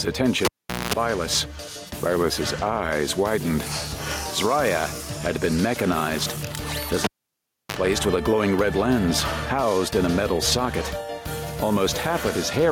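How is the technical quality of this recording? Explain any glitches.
The recording has one persistent fault: gain pumping, present from start to finish. The level rises in the gaps, then drops under each loud sound, a swing of about 5 dB that keeps the level breathing throughout. The likely cause is input gain set far too high, with a fast limiter or compressor clamping down on each peak and releasing in the pauses. Loud and quiet passages sit unnaturally close together, leaving the sound flattened and squashed.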